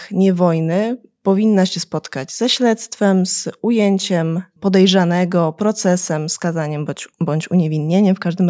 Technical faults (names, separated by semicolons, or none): none